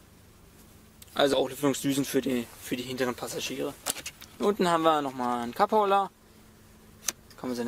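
At 1.33 to 1.36 s, compressed frames are skipped. Whole frames never reach playback, so the sound jumps ahead by around 40 ms, which fits two missing 20 ms frames.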